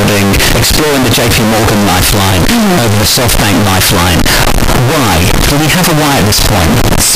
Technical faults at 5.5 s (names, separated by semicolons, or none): signed and unsigned mixed up